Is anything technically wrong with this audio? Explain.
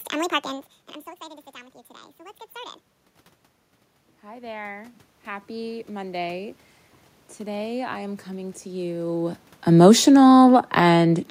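Yes. The automatic gain control audibly chases level changes at the microphone, producing slow swells and a slow fade that are not part of the original sound.

Automatic gain rising occurs twice, from 1.54 to 2.84 s and from 4.21 to 6.63 s. Each time the input falls by about 18 dB, and the gain control responds by raising its gain about 4 dB over the span. Because gain applies to everything, the speech and the room noise swell upward together. The second rise, lasting nearly 2.4 s, is the more drawn-out of the two.

Automatic gain falling runs from 9.67 to 11.21 s, shortly after the talker moves at the microphone around 9 s. The control pulls its gain down about 4 dB across roughly 1.5 s. The speech sinks, carrying the room background down with it. That background dip is the giveaway that this is gain riding rather than the talker's own movement.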